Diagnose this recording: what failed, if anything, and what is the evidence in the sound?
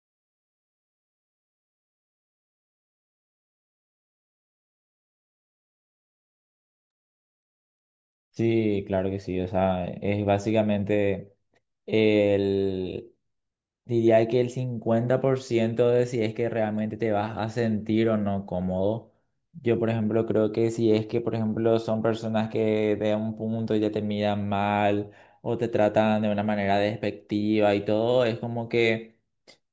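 Nothing stood out on listening to this speech recording that would point to a failure at any stage of the chain.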